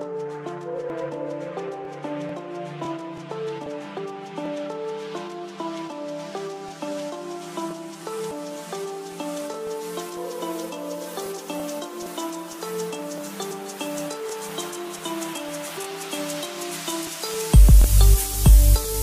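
From 9.67 s to 18.84 s, periodic USB or driver dropouts recur every 0.5 s, around twenty in all. A background task stalls the audio path, so roughly a millisecond is replaced by silence each time. They sound like evenly spaced ticks, and the waveform shows tiny gaps with vertical broadband lines on a spectrogram.

Damaged data in a compressed stream strikes at 11.37 to 11.39 s and again at 13.50 s. The decoder misreads corrupted frames and resyncs, producing brief glitches. A spectrogram shows short smeared or blocky patches, and the waveform shows an abrupt discontinuity at each.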